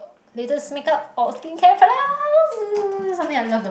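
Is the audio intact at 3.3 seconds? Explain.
No. At 3.3 seconds the voice and the background noise are both swelling louder together, a gradual climb that runs from about 2.58 s to the end of the clip. This is automatic gain rising: the gain control judged the input too quiet and steadily raised its gain.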